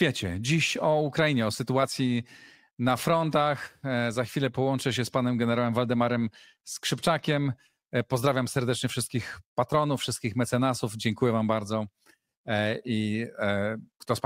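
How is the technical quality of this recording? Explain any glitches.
The technical quality of this recording shows no glitches to explain.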